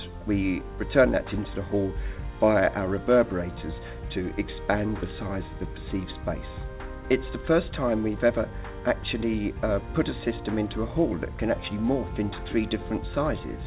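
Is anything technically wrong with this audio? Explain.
No, nothing is technically wrong: the audio has come through a call path whose band stops at about 4 kHz, which fits a narrowband telephone codec such as G.711 mu-law at 64 kbps, and it carries that codec's usual coding noise.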